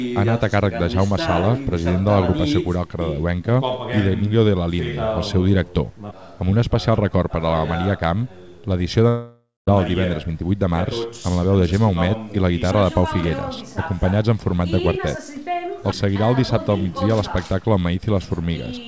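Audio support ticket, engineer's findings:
Long network dropout, 9.08 to 9.69 s. The last sound gets stretched into a fading buzzy hiss, goes quiet for about 0.2 s, then audio picks up again with roughly 0.6 s gone. Likely the jitter buffer concealing lost packets. Band stops at 8 kHz throughout, which fits a G.722 wideband call codec.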